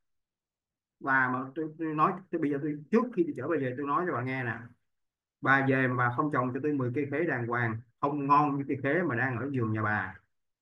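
Nothing in this speech recording stands out as a technical fault, so there's nothing to flag here.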